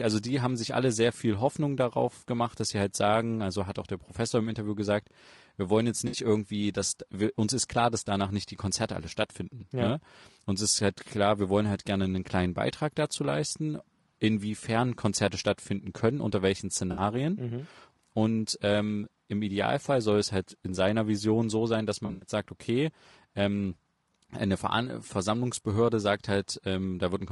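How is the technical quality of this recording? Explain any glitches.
The speech is rough and grainy throughout, and three brief smeared dropouts break it up.

Throughout, noise sits between the voice's harmonics and the top band sounds thin and synthetic. This is likely low-delay AAC compression at a rate that fits about 32 kbps: short frames resolve pitch poorly. It is steady, unlike the dropouts.

At 6.07 s, after "gesagt wir wollen jetzt" and before "irgendwie dass wir uns", AAC frame loss with concealment replaces about 60 ms with a smeared, phasey patch rebuilt from the last good spectrum. At 16.91 s, after "stattfinden können unter welchen", there is a similar 60 ms patch. From 22.05 to 22.28 s, after "so sein dass" and before "sagt okay ähm eine", 140 ms of losses spread over 160 ms, with the longest run about a tenth of a second. These are brief local smears, not silent gaps or clicks.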